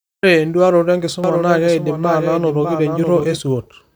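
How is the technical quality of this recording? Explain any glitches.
The recording has one glitch: a doubled audio track. From 1.24 s to 3.38 s, a second copy of the speech runs underneath the first. It trails by roughly 0.7 s and sits a few dB quieter. It is most likely the same signal captured again through a slower path, or two misaligned copies left in an edit. The echo has no room colour or decay. It starts and stops abruptly.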